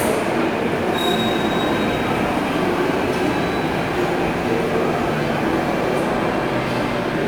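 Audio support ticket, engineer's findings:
Crude rate conversion, 0.75 to 5.97 s: gritty inharmonic fizz riding on loud and high content, roughly 30 dB below the signal. Sounds like nearest-sample repetition, consistent with 44.1 kHz audio pushed to 48 kHz unfiltered. Unlike hum or clipping, the fizz tracks the signal's level and spectrum.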